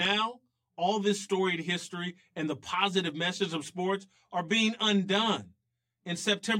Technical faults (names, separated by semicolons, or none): channel delay (comb filtering)